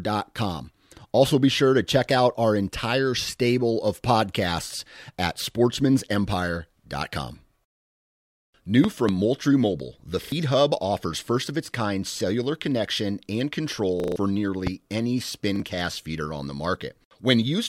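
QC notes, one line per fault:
8.84–9.11 s, loud pop: two sharp pops in quick succession, peaking about 15 dB above the speech, which carries on underneath. Each is a sudden pulse, likely from a plug, switch or static discharge, shaped by the following circuitry. On the waveform they stand out as two tall spikes well above the speech envelope; on a spectrogram they are thin vertical broadband lines running from the lowest bins to the top.
14.67 s, loud pop: a single sharp pop about 10 dB above the speech, again a brief voltage pulse, likely from a switch or static, added on top of the sound. The waveform shows one narrow spike clearing the surrounding peaks, and the spectrogram a single full-height vertical stripe.
10.24–10.32 s, 14.00–14.16 s and 15.56–15.60 s, repeated buffer: short stutters where the same 40 ms slice plays again because fresh audio arrived late. The first repeats twice, replacing roughly 70 ms of speech. 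The second, right after "kind cellular connection and", repeats four times, losing about 150 ms and giving a short stutter. The third repeats once just before "cast feeder on the", costing about 40 ms. On the waveform each run appears as identical 40 ms blocks placed side by side with abrupt joins. The spectrogram shows the same pattern copied in adjacent columns, with vertical lines at each splice.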